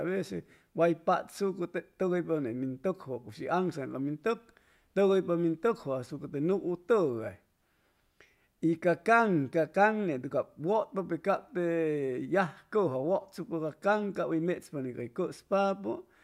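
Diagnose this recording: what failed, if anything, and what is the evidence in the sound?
No fault found in this recording.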